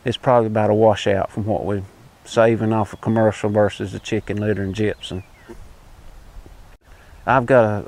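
No technical faults can be heard anywhere in this audio.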